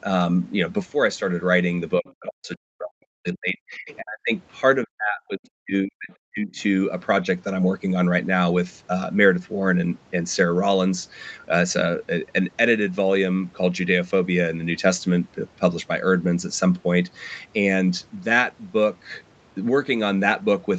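From 1.98 to 4.32 s the speech keeps sinking and chopping out, at its worst dropping by something like 40 dB, with roughly two seconds of the stretch affected. That's speech suppressed in double talk, likely because both ends were talking at once and the echo canceller couldn't tell this talker from the loudspeaker echo, so it turned everything down. Inside that stretch, at 2.1 s and again around 3.9 s, you catch brief, faint scraps of a second voice, maybe 25 to 30 dB under the main speech. That's the other side's voice leaking through, where the canceller likely left a bit of the far end in the mic signal. From 4.85 to 6.58 s the same double-talk suppression returns, again with drops of around 40 dB and about a second and a half of the audio ducked or cut up.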